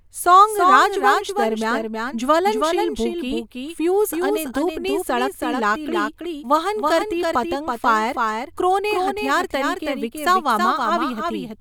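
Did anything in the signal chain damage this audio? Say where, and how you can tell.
Yes. Throughout the speech, a second full-band copy trails the original by roughly 300 ms at about 5 dB quieter, with no decay or room colour. This doubled audio track likely comes from a slower second capture path, or an edit holding two copies out of step.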